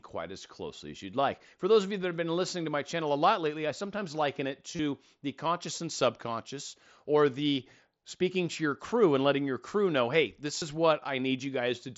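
Three short dropouts come from concealed Bluetooth headset packet loss: 4.76 to 4.79 s, a brief blip at 8.53 s, and 10.59 to 10.62 s. Voice packets between headset and phone went missing, about 30 ms, 15 ms and 30 ms worth, and the receiver patched each gap by repeating the closest-matching bit of the last 20 ms or so. You get a brief buzzy, steady-level smear, then a slight warble as the real speech comes back, all over the mSBC wideband link.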